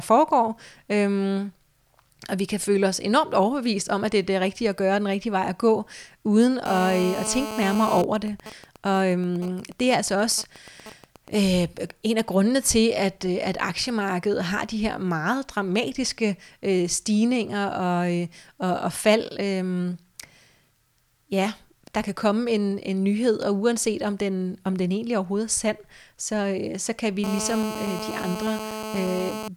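A Danish speech recording is marred twice by GSM phone buzz. After "vej at gå uden", from 6.66 to 7.98 s, a hard, raspy buzz at 217 Hz sits about 8 dB below the speech. It is rich in harmonics and ignores the speech entirely. It returns after "øh så kan vi", from 27.24 to 29.48 s, at the same level. A 2G phone in a call was transmitting nearby. Its radio bursts, 217 per second, were rectified by the audio circuitry. Between the two, from 7.98 to 11.35 s, come GSM signalling bursts. They form even ticks with a longer 217 Hz buzz twice a second, roughly 15 dB below the speech. The phone was still in the call, but its user had gone quiet. It therefore sent only short groups of bursts, and the circuit rectified those too.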